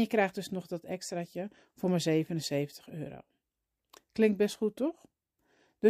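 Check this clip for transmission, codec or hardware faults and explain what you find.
Nothing turns up on a listen; the speech comes through with no faults to report.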